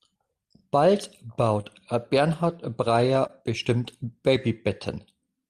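A speech recording with two brief smears, one at 1.61 to 1.65 s and another at 3.27 to 3.31 s, where the sound wobbles for an instant before settling. Both are short concealed packet loss: about 20 ms of audio arrived too late to be decoded each time, and the receiver papered over the gap by extending the preceding sound for roughly 17 ms and 15 ms before crossfading back into the real signal.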